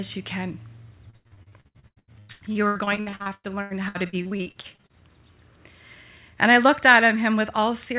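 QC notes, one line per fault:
1.10–4.97 s, repeated packet loss (robotic sound): right after "you can", 35 short holes follow one another, the longest about 93 ms. Each is patched by stretching the last sound, so about 41% of the stretch is filled-in, choppy and robotic.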